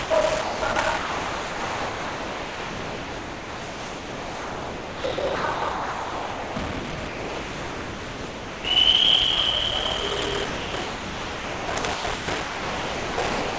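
Throughout the recording runs a block size mismatch (padded). One stage writes blocks shorter than the next stage reads, consistent with 1024-sample writes, and zeros fill the remainder. The result is a steady buzz at 38.3 Hz and playback at 0.889 times normal speed with nearly unchanged pitch. On a waveform this appears as evenly spaced flat gaps. On a spectrogram it shows as thin vertical breaks at the same rate.

From 0.04 to 0.10 s, 60 ms of the opening is lost as sound dropped by the voice detector. It was likely misjudged as background, so nothing was sent and the receiver filled the gap with comfort noise. The spectrogram shows a brief smooth, featureless noise patch where the real texture should be.

Sound chopped by the voice detector runs from 0.42 to 8.64 s, where about 7 s in total is replaced, and again from 10.46 to 13.58 s, with about 2.5 s replaced. The detector likely toggled repeatedly, so passages of real sound alternate with synthetic noise. 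The waveform shows detailed stretches broken by flat, even-level blocks. On the spectrogram, textured regions alternate with uniform noise bands, all capped at 8 kHz by the G.722 call path.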